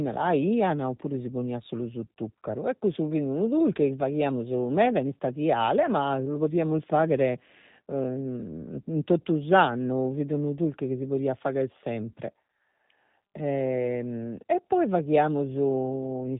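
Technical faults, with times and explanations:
throughout, G.729 codec: the speech sounds noticeably rough and synthetic, with nothing above 3.8 kHz. The coder rebuilds each 10 ms frame from a vocal tract filter, a pitch predictor and a handful of pulses, which fits an 8 kbit/s G.729A stream.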